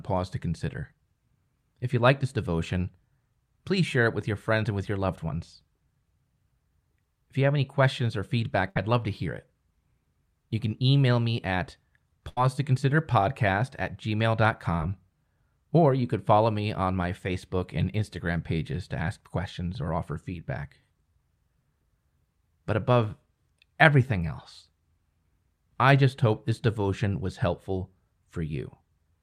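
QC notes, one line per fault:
8.69–8.76 s and 12.28–12.38 s, burst of packet loss: two short dropouts where a run of audio never arrived in time. Each time the receiver keeps the last sound going and turns it down, so you get a held buzz or a fading hiss instead of real content. Then the audio picks up further along, with about 60 ms missing at the first and about 80 ms at the second.
14.78–14.80 s, short concealed packet loss: a much smaller hole, about 10 ms of audio lost. The decoder patches it by extending the sound just before it, either from its pitch or as shaped noise, for about 11 ms before blending back into the real signal. It's brief enough to come across as a quick smear or wobble, and a short consonant sitting in that spot could drop out.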